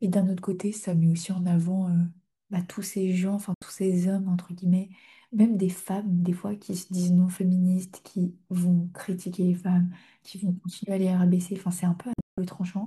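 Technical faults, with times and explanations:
0.52–2.12 s, drift correction step: The sound abruptly slows by 5.3 % and drops about 95 cents, close to a semitone, then snaps back to normal speed and pitch at 2.12 s. This is likely a clock-matching resampler stepping its rate to refill its buffer. Speed and pitch move together as one fixed block with clean edges. That sets it apart from tape wow, which sweeps pitch gradually and keeps wavering.
3.54–3.62 s and 12.13–12.38 s, digital broadcast dropout: The audio mutes with a quick 3 ms fade and returns cleanly. The first hole is a single 72 ms gap. The second spreads over about 240 ms: 216 ms is missing in total, and the longest silent stretch is 168 ms. This pattern fits whole frames failing their check at the receiver, with nothing transmitted meanwhile surviving. The result is true silence rather than the smeared, repeated fill of packet-loss concealment.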